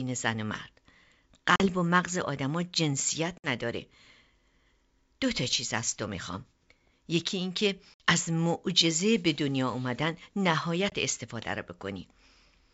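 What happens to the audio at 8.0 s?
Packet loss on an ADPCM call hits from 7.94 to 8.04 s: a few packets, about 60 ms of audio, are dropped and filled with silence. The decoder's predictor and step size lose step with the sender's, so after the hard-edged gap the speech resumes with brief, slight distortion before settling.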